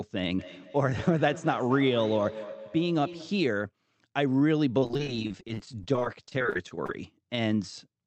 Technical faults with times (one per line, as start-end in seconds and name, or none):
0.38-3.50 feedback echo between two devices
4.78-7.07 repeated packet loss (robotic sound)